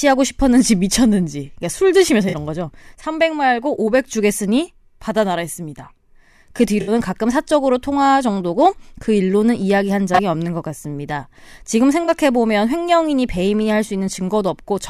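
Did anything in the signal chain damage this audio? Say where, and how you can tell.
Yes, at the codec: corrupt frame concealed at 2.29–2.34, 6.81–6.91, 10.14–10.19 and 12.04–12.10 s, where the decoder smoothed over damaged frames.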